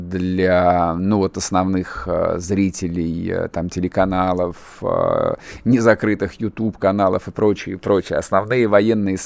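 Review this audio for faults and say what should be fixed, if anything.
There are no faults in this audio, so nothing needs to be fixed.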